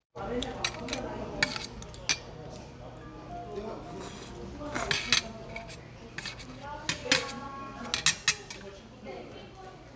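A recording of everyday sounds with nothing technically wrong with it.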